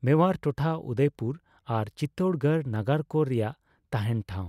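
Speech, with no technical fault anywhere in the recording. There is nothing here that calls for a time stamp or a cause.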